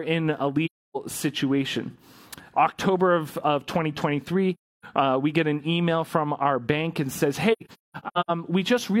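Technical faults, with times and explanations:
0.65–0.97 s, AAC frame loss with muting: about 300 ms of sound drops to silence where lost frames were zeroed. The overlapping windows fade it out and back, so it shows as a soft-edged blank column on a spectrogram and a tapered gap in the waveform.
4.54–4.85 s, AAC frame loss with muting: the same roughly 300 ms muted hole, with gentle fades at each edge.
7.52–8.31 s, AAC frame loss with muting: about 555 ms of silence scattered across 768 ms, with the longest gap near 200 ms. It appears as several faded blank stripes with sound between them.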